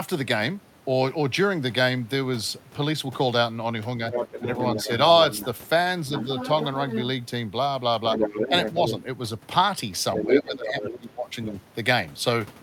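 From 4.11 to 4.87 s a second voice sits under the talker. This is the other side's voice leaking through, likely because the echo canceller left loudspeaker playback in the microphone signal. It returns at 5.32 to 5.46 s (faint), 6.16 to 7.03 s (somewhat quieter than the talker), 8.12 to 8.92 s (roughly as loud as the talker), 10.15 to 10.99 s (louder than the talker), and 11.45 to 11.52 s (faint again). What marks it is an added, separate voice, not damage to the main one.

From 10.25 to 11.55 s, while that strongest leak is playing, the talker's own voice dips in pieces. Over about a second in total it drops by as much as about 20 dB. This is speech suppressed in double talk, where the canceller likely could not tell the near talker from the echo and turned both down. Unlike the leak, which adds sound, this one takes the talker's voice away.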